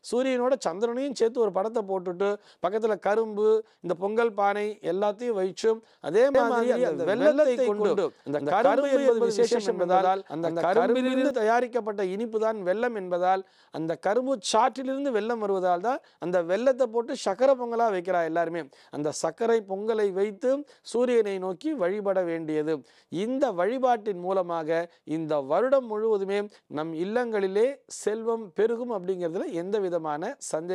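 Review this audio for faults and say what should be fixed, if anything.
Doubled audio track, 6.35 to 11.31 s: a roughly equal-level copy trails about 150 ms behind, likely a second capture path or out-of-step edit. Route each source through a single capture path and check edits for overlapping duplicate regions before export.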